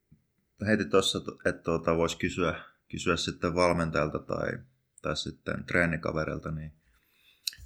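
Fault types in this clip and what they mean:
No technical faults can be heard anywhere in this speech recording. Nothing in the sound points to a problem along the chain that carried it.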